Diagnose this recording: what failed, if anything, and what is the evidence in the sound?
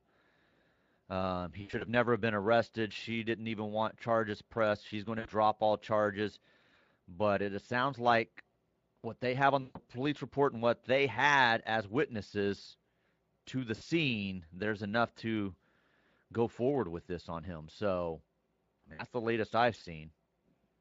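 Brief buzzy, smeared stretches replace the speech at 1.61, 5.19, 9.61, 13.75 and 18.93 s. Each fades toward a coloured hum and leaves the voice thin just afterwards, and the one at 1.61 s breaks into scattered dropouts over about 200 ms. This is VoIP packet loss concealed by the speech codec, a network fault. The Speex decoder, whose light coding roughness runs throughout, carried its last pitch and filter forward with falling gain across 60 to 140 ms gaps, consistent with lost 20 ms frames.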